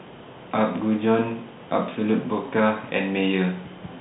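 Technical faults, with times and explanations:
No technical faults can be heard in this speech.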